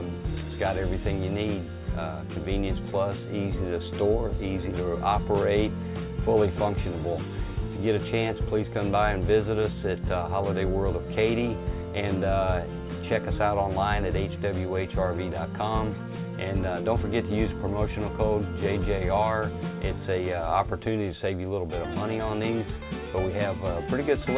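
No dropouts, clicks, distortion or level jumps occur anywhere in the recording.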